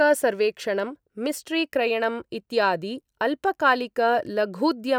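The speech recording shows no audible technical faults at any point.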